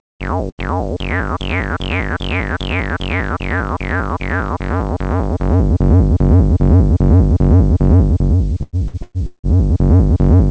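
Right near the start, from 0.49 to 0.75 s, there's a burst of packet loss. The receiver stretches the last bit of sound for about 80 ms, fading it as it goes, then jumps ahead, so roughly 90 ms of audio simply never arrives.

Later, between 8.63 and 9.46 s, it gets choppy: repeated packet loss gives that robotic texture. Four separate holes get patched by extending what came just before, the longest lasting about 170 ms, so roughly half that stretch is filler. The band-limiting to 8 kHz throughout fits a G.722 call path.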